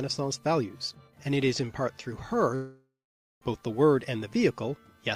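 From 2.55 to 3.43 s the sound fades into a buzz, then half a second of silence, likely a long network dropout losing that stretch.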